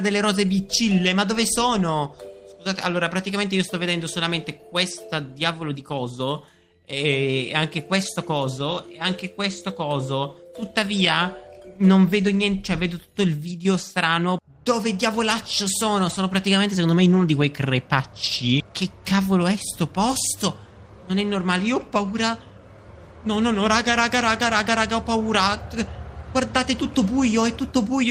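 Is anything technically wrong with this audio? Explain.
No, nothing technically wrong can be heard here.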